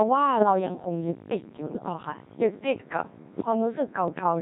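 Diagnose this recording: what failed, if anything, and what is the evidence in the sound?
Robotic, buzzy speech runs through the whole recording, with a synthetic sheen. The failure is at the codec stage: the Codec 2 vocoder. It transmits only pitch, voicing, energy and a coarse spectral envelope per frame, then rebuilds the speech from sine waves. The original waveform is discarded. The heavy, smeared quality fits Codec 2's 1.6 kbit/s mode, where very little spectral detail survives.

Two short bursts break into warbling, bleepy gibberish with sudden jumps in pitch, level and tone colour: one from 1.68 to 1.93 s and a shorter one from 4.08 to 4.23 s. These are bit errors on digital voice radio, a network or transmission stage failure typical of a weak signal at the edge of coverage. Corrupted bits in a handful of frames fed wrong pitch, energy and envelope values to the decoder. At an error rate of several percent, the decoder synthesised nonsense rather than silence.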